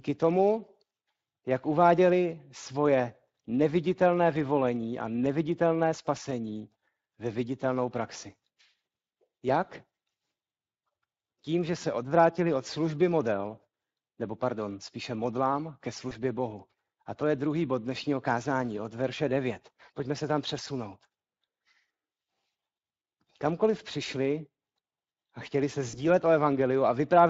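Speex codec damage runs through the whole speech clip. This CELP coder spends a limited bit budget on the excitation signal that drives its vocal-tract filter. Here the speech comes out audibly hoarse and grainy, with a rough, noisy edge. The amount of damage fits a Speex setting of around 20 kbps. That setting is moderate, yet the coarse excitation modelling is still plainly heard.

VoIP packet loss concealed by the speech codec occurs at 16.09 to 16.16 s and again at 25.89 to 25.99 s. Each time, a packet gap forced the decoder to keep extrapolating from the last pitch and filter it had received while lowering the gain. The result is a brief buzzy or noisy stretch that fades. The first gap points to one lost 20 ms frame and the second to about 40 ms. Afterwards the speech stays weak or distorted for a moment while the decoder recovers.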